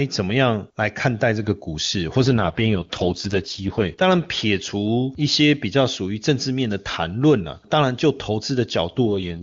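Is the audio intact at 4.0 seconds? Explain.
No. At 4.0 seconds the clip is at the very end of an AMR rate drop that runs from about 2.22 to 4.02 s. The radio link weakened and the network ordered the AMR wideband codec down from its clean high rate to its lowest mode, trading speech bits for error protection. The sound fits a fall from 23.85 to 6.6 kbit/s. The bandwidth holds and nothing drops out, but the speech turns rough, raspy and synthetic until the rate recovers just after 4.0 s.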